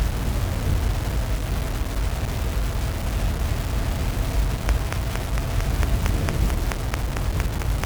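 From the very start the whole clip has a coarse, gritty texture: low bit depth without dither. The grain moves with the sound and sits only around 15 dB below it. That likely comes from plain rounding to very few bits, consistent with about 5.

Then at 4.69 s a train of clicks kicks in and runs to 7.85 s. It's evenly spaced ticking at 4.45 per second, about fifteen pops in all, poking well above the audio. This is likely interference or a faulty connection injecting repeated pulses.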